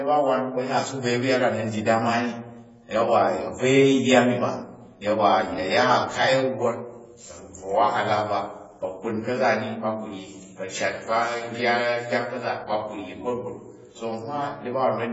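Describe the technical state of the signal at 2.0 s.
At 2.0 s the speech carries heavy AAC compression damage, present throughout the clip. Nothing sounds above about 7.7 kHz. Sibilants turn fizzy and smeared, with a warbling texture. Likely AAC-LC at a very low bitrate, starving frequency bands of bits.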